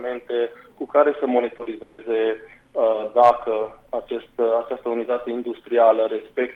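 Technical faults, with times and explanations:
1.57–1.70 s and 1.63–1.67 s, short concealed packet loss: two overlapping gaps of about 20 ms each arrived too late to decode. The receiver bridged them by extending the preceding sound and blending back, leaving a brief smear, and about 9 ms of audio is simply gone.
1.83–2.01 s, long network dropout: for about 160 ms the real sound gives way to a continuation of what came before, heard as a fading buzz or hiss with no true silence. The likely cause is a stretch where no audio arrived and the receiver filled the whole gap.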